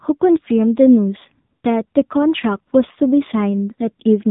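From start to finish, the speech carries AMR narrowband mobile codec damage: a vocal-tract model rebuilt from sparse pulses leaves it buzzy and synthetic, which fits a low mode around 7.4 kbps. A spectrogram shows a hard ceiling at 4 kHz, with nothing above it.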